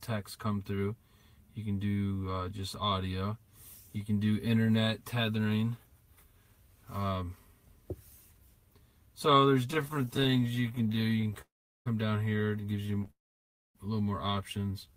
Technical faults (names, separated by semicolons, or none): repeated stalls (stutter); call audio freeze; jitter buffer slow-down